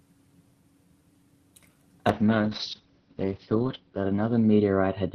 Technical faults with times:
2.10-5.14 call bitrate drop

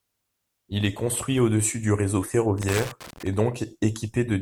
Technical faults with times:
2.58-3.28 loose connector crackle

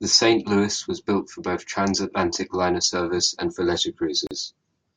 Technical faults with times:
4.27-4.31 gap at a join of encoded pieces

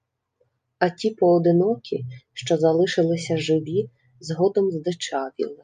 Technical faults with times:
none

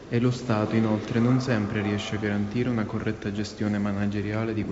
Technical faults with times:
none

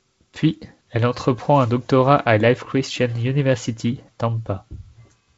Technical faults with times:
none

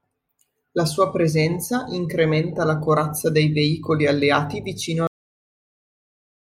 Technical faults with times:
5.07-6.52 cut-off end

